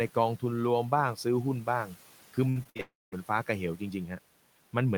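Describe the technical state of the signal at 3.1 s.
At 3.1 s the signal is inside a gap from 2.81 to 3.14 s, most likely a long network dropout: about 0.32 s of audio never reached the receiver, which tried to cover the hole by extending the last sound it had. That concealment trails off into a fading buzz or hiss, and for roughly the final 0.21 s only silence or a low steady noise remains before the speech resumes with the lost part missing.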